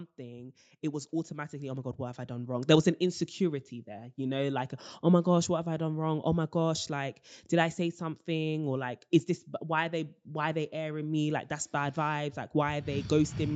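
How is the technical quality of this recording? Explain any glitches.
The main glitch comes right at the start of the speech. From 0.16 s to 2.77 s, the level swells steadily by about 11 dB, with the speech and the background room sound rising together instead of holding steady. This is automatic gain rising: the gain control judged the opening input too quiet and raised its gain gradually over those first two and a half seconds. The audio stops at around 8 kHz, which is consistent with the band limit of the call path it went through.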